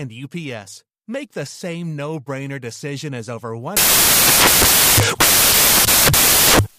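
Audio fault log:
3.77 s to 6.78 s, samples built from the wrong bytes: from 3.77 s to the end of the clip, the speech gives way to loud, broadband hiss resembling white noise. The decoder is assembling each sample from mismatched bytes, through a one-byte offset, reversed byte order or a wrong alignment assumption, so the rapidly changing low-order bits land in the high-order positions and dominate every value.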